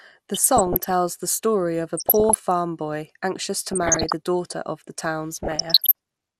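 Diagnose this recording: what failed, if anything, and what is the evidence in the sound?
The speech sounds dull throughout, with a gurgling, granular edge. This is most likely MP2 compression at the codec stage, with damage that fits a rate around 80 kbps. Starved of bits, upper sub-bands drop out and flicker, so a spectrogram shows a ragged, patchy top edge with blocky holes.

DAB burbling, short blips of noise in single sub-bands laid over the speech, appears at 0.34–0.91 s, 1.97–2.35 s, 3.68–4.14 s and 5.31–5.92 s. This is a reception fault: bit errors of roughly 0.4 to 0.7 percent get past error correction and corrupt the audio samples, and wrong scale factors that get through make single sub-bands jump in level for up to a frame. On a spectrogram these show as isolated bright rectangular blocks.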